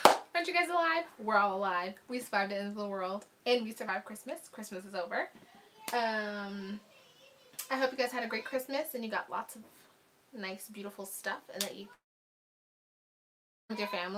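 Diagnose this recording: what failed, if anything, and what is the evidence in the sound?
Network stage: from 11.93 s to 13.71 s the sound decays briefly into near-silence for about 1.7 s, then resumes with that section missing, likely a long network dropout.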